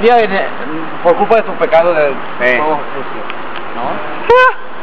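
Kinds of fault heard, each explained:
No faults detected: no dropouts, clicks, distortion or level anomalies anywhere in the clip.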